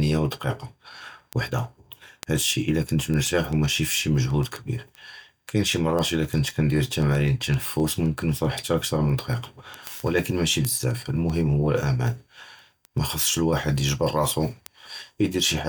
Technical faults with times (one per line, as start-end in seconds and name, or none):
0.16-15.57 word clock ticks